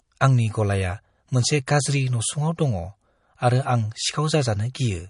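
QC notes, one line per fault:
Throughout: MP3 compression, likely the cause of the plainly audible damage across this speech. Nothing survives above 10.6 kHz, the fixed treble cut an encoder imposes when bits are scarce, and the level of damage fits a rate of about 40 kbps. Weak frequency lines drop in and out between frames, giving a watery, swirling texture, and s sounds turn metallic. That flickering is what separates it from a plain low-pass filter, which dulls the top without any swirl.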